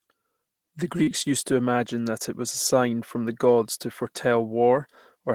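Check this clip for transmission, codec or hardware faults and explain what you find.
One transmission fault is present. At 1.03 to 1.10 s, just before "used to imagine that", the speech briefly smears and wobbles. This is short concealed packet loss: about 40 ms of audio arrived too late, and the receiver extended the preceding sound to cover the gap before blending back into the real signal.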